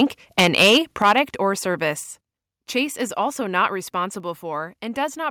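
Right at the start, 0.00 to 0.02 s, there's a brief touch of microphone overload, peaks about 2 dB past the converter's limit. From 0.38 to 1.19 s it gets worse, about 10 dB over, with around one sample in twenty flattened. The input gain was likely set too hot, so the converter shears off the loudest speech peaks and leaves a gritty, crackly edge. Then the microphone volume stepped down three times: at 1.02 s by about 6 dB, right inside that clipped stretch, at 2.04 s by about 4 dB, and at 4.20 s, just after "is also not", by about 2 dB. Each time the speech and background drop together in one abrupt step, likely the call software pulling the input gain back after sensing overload.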